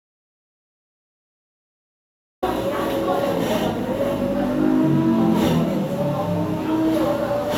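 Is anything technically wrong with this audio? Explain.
Yes. There is an audio dropout to silence from the very start until 2.42 s. The sound is completely absent, with no room tone at all, and then cuts in abruptly. The likely cause is lost input, with silence written meanwhile. On a waveform this appears as a flat line, and a spectrogram shows a blank band before the sudden onset.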